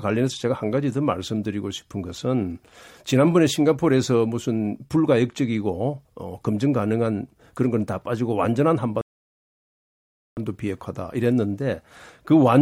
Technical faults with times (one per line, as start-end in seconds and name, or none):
9.01-10.37 rebuffering stall